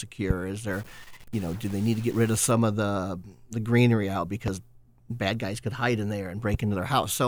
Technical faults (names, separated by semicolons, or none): loud pop; stuck bit